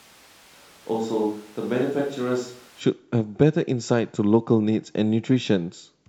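From 0 to 2.80 s, the speech comes through a distant microphone. The problem is already under way when the clip begins. The voice sounds roomy and hollow, with thin bass. It sits about 10 dB lower than after the change. Room noise is only about 25 dB below the speech. The likely cause is a failed close microphone, leaving a farther one to pick up the sound. At 2.80 s the close sound returns abruptly.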